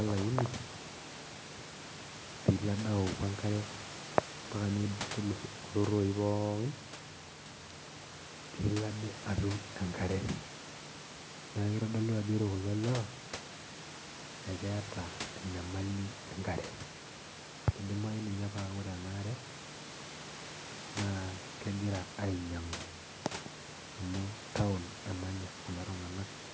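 No technical faults are present in the speech; the call microphone processing leaves nothing above 8 kHz and trims the lowest bass as expected, and the room noise sits about 16 dB below the speech.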